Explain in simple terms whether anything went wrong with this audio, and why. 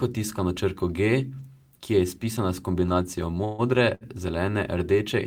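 Two delivery problems in this speech recording.

From 3.45 to 3.62 s there is a call audio freeze: the last sound turns into a fading buzz or hiss for about 140 ms, then the speech resumes where it stopped. The likely cause is packets held up in transit, which emptied the receiver's jitter buffer. Nothing is lost, but everything after runs 140 ms later.

At 3.95 to 4.04 s there is a short stall from a late packet. One packet missed its slot, so the receiver stretched the current sound for about 63 ms until it arrived. That sound is held slightly too long, with a faint buzz or dip.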